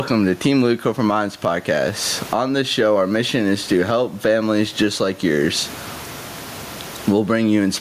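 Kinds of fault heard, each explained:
Gain pumping: The input gain is likely set far too high for the microphone, so a fast limiter or compressor keeps clamping down whenever the speech gets loud and letting go in the pauses. Throughout the clip the level swings by around 20 dB. The room noise sits about 35 dB under the speech. The speech sounds flattened and squashed.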